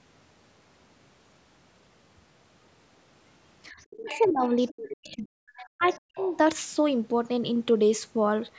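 Speech over a call path, band-limited to nothing above 8 kHz, with speech suppressed in double talk at 3.7–4.44 s, 4.69–5.45 s and 5.61–6.18 s. The talker's level falls by up to about 35–40 dB, most likely because the echo canceller turned everything down while both sides spoke. On a waveform these show as sudden pinched gaps, and on a spectrogram as near-empty columns. The other side's voice leaks through at 4.02–4.48, 4.67–4.73, 5.57–5.65, 5.93–5.98 and 6.16–6.37 s, about 15–25 dB below the speech. This is likely residual loudspeaker echo the canceller failed to remove, visible on a spectrogram as faint, broken harmonic traces inside and beside the suppressed gaps.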